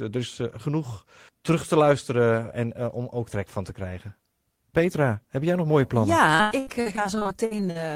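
From 6.35 to 7.77 s the speech turns choppy and robotic, with pieces dropping out and the last sound carried on across the gaps. This is repeated packet loss: holes up to 96 ms long keep arriving, and about a third of the stretch is patched by stretching the preceding sound.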